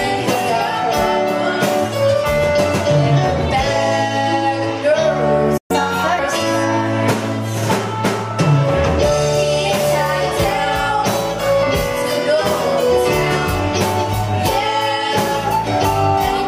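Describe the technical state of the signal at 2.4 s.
At 2.4 s the signal is intact, with no dropout, clipping, glitch or other fault to be heard.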